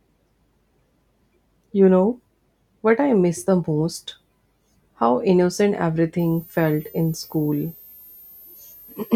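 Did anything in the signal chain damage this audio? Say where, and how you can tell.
Yes. From 6.19 s to the end, a switching supply whistle enters the analogue stage, drifting between 12.8 and 14.6 kHz at roughly 25 dB below the speech: a wandering thin line on the spectrogram as the supply's burst mode or beating tracks load.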